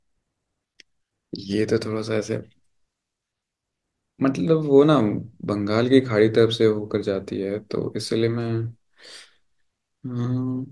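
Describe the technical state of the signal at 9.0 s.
At 9.0 s the speech signal is intact, with no audible fault at that moment.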